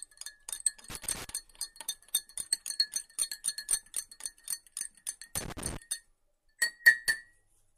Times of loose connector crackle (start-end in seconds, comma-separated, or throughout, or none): 0.90-1.30, 5.36-5.77